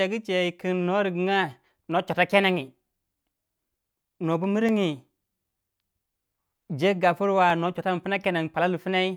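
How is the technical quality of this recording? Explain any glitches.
The speech is marred by two bursts of CD scratch ticks. From 3.95 to 5.18 s, six sharp ticks arrive at roughly five per second, each only a few milliseconds long. The same pattern returns from 7.5 to 8.48 s with five ticks. A surface blemish hit on each disc rotation corrupted more data than error correction could restore, so the player patched or muted those samples.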